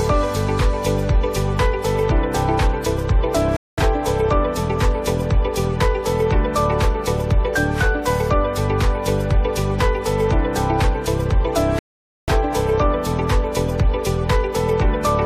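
At 3.57 s and again at 11.79 s the audio drops to silence in a rebuffering stall, as playback runs out of downloaded data and waits. Each resumes exactly where it stopped, adding about 0.21 s and 0.49 s respectively without losing material.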